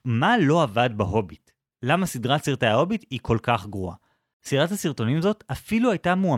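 Nothing in this speech recording stands out as a technical fault; there's nothing to flag anywhere along the way.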